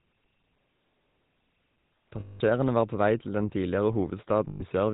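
A short speech clip that's been through the GSM full-rate codec for its whole length, and you can plainly hear it. The codec rebuilds the voice from a vocal-tract model fed by regularly spaced pulses, and it keeps only a sparse version of that excitation. That gives the buzzy, gravelly grain running through everything. Nothing comes through above 4 kHz, so it sounds dull and boxy, and the roughness fits a coarse 13 kbps stream. There are also two spots with lost GSM frames, from 2.2 to 2.41 s and from 4.48 to 4.63 s, about 200 ms and 120 ms long. In each one the decoder kept repeating the last good frame's settings. The sound hangs on as a rough, metallic ring before normal sound resumes.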